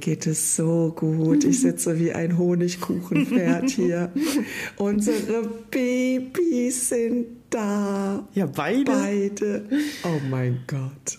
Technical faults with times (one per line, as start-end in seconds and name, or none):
none